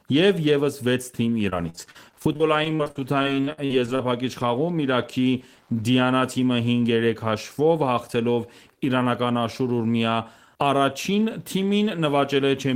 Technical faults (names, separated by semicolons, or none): Wi-Fi interference; repeated packet loss (robotic sound)